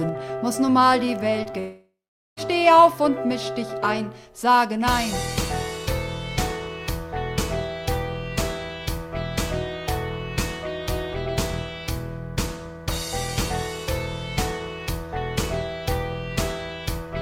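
Short concealed packet loss shows up twice, at 1.43 to 1.47 s and 1.51 to 1.55 s. Each time about 20 ms of audio failed to arrive and the receiver patched the gap by extending the preceding sound, giving a quick smear or wobble rather than any silence.

From 1.59 to 2.39 s, about 0.78 s is lost. The last sound is stretched into a fading buzz or hiss, and then the final 0.44 s goes silent before the audio resumes further on. The cause is likely a long network dropout. Unlike the brief patches, this gap is long enough to decay to silence.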